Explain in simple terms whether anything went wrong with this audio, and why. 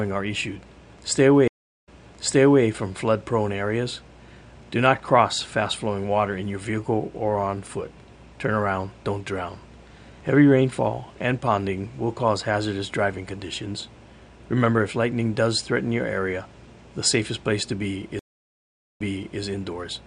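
Stream reconnect, twice: from 1.48 to 2.64 s and from 18.19 to 19.40 s. Each time the connection dropped, so the player went silent, for 0.37 s the first time and 0.76 s the second. It then reconnected and started decoding afresh. Because the server resent recent audio, playback picks up slightly in the past, repeating about 0.79 s of sound at the first break and about 0.46 s at the second.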